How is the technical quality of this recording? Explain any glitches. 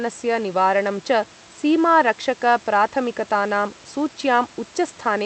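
The technical quality holds up, and there are no glitches to explain.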